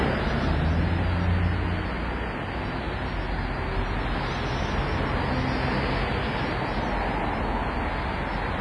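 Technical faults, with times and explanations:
Throughout, WMA compression: the audio has a heavy ringing, washy character, with a hiss that swells and fades along with the signal, and nothing at all above 10.6 kHz. This is likely a WMA 1 encode at a low bitrate, around 24 kbps. Its long transform blocks smear quantisation noise over tens of milliseconds, and it zeroes weak spectral lines. Unlike a plain low-pass filter, the treble loss comes with breathing noise and smeared transients.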